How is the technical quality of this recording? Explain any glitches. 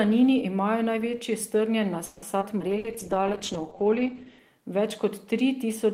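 The recording has several clustered network-style glitches between about 2 and 4.5 seconds. They come from a live call path, not the original capture.

Call audio freeze, 2.05 to 2.25 s, right after "imajo največji strnjen": about 170 ms of held, fading buzz or hiss is inserted. Late packets likely emptied the jitter buffer. On a spectrogram it shows as smeared, stretched harmonics.

Skip ahead, 2.40 to 2.44 s and 2.59 to 2.63 s: playback jumps forward, dropping roughly 70 ms each time to shed the built-up delay. The waveform shows abrupt splices with almost no gap.

Call bitrate drop, 2.68 to 4.50 s: the encoder falls from 32 to 11 kbps and its bandwidth narrows from 20 kHz to 8 kHz. The sound turns muffled and coarse, and the spectrogram's upper band goes empty.

Burst of packet loss, 2.78 to 2.87 s: 60 ms is lost and replaced by a concealment sound that decays before resuming further on. 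It appears as a brief, dimming patch.

Jitter buffer slow-down, 3.73 to 4.25 s: repeated pitch periods add 68 ms, so the audio plays at 88% speed with unchanged pitch. Harmonics look stretched horizontally, and some syllables sound drawn out.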